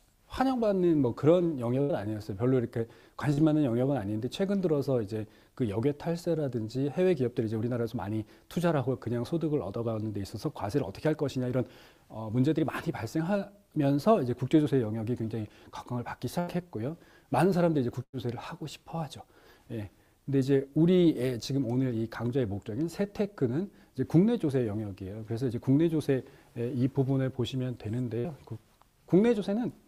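The audio has four bursts of packet loss, at 1.81–1.91 s, 16.39–16.49 s, 18.03–18.15 s and 28.19–28.26 s. Each gap is about 50 to 100 ms long. The receiver stretches the last sound across it and fades it into a held buzz or hiss. The audio then picks up further along. There is also one short concealed packet loss, at 3.33–3.39 s. About 40 ms failed to arrive in time. The decoder patched the hole by extending the preceding sound and blending back, leaving a brief smear.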